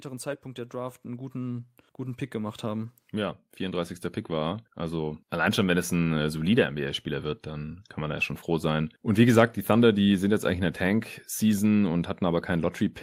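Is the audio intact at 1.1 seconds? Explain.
No. Automatic gain rising runs from 0.05 to 5.38 s. The gain control hears quiet input and lifts it about 15 dB, so speech and background swell together.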